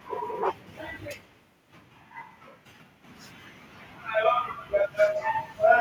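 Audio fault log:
0.02–0.06 s, 1.21–1.33 s, 5.13–5.30 s: echo leak. A copy of the speech lags it by 116 ms: faint in the first two, about 40 dB down, but near the end only about 5 dB below. Likely a loudspeaker echo the far end's canceller didn't fully remove.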